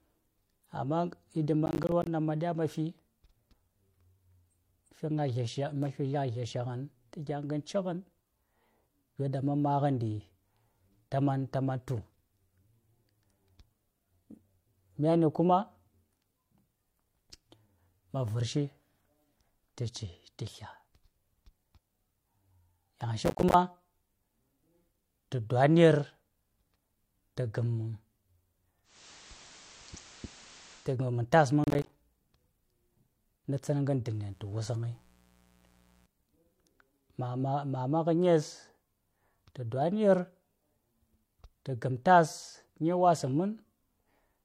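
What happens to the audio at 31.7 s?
Processor overload crackle runs from 31.64 to 31.9 s, just after "gammam tas man". The processor misses the deadlines of many short buffers in a row, buffers of around ten milliseconds each. Each miss drops in a hard-edged gap of silence, and the run of gaps is heard as gritty crackling over the speech.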